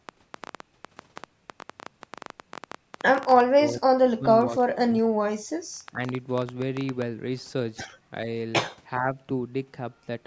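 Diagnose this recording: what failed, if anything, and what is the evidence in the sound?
Train of clicks, from 0.09 s to about 7.03 s: roughly seventy sharp, similar ticks at around 11.7 per second, unevenly spaced, peaking well above the speech and audible in the pauses as well. A pulse train that repeats for seven seconds and then stops points to the analogue wiring or interface stage. The likely cause is interference from nearby equipment or a faulty connection or power supply, coupling the same impulse into the signal again and again.

Speech suppressed in double talk occurs at 3.46 to 4.27 s, with the speech pulled down by around 40 dB at its deepest. It happens again from 4.44 to 6.0 s, at around 25 dB. A brief, shallow dip of a few dB follows at 8.99 to 9.1 s. The speech sinks, which places the fault in call processing. The echo canceller was likely facing both ends talking at once. 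Unable to separate the local talker from the loudspeaker echo, it attenuated both. The call's microphone processing is also audible in the band stopping at 8 kHz, which is normal for that path.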